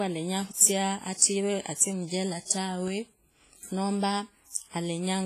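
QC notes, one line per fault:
Throughout, WMA compression: the speech has likely passed through a low-bitrate WMA encoder, with damage heavy enough to fit about 24 kbps. Long transform blocks smear quantisation noise around each sound and drop weak detail, so it rings and washes, with signal-following hiss and nothing above 15.4 kHz.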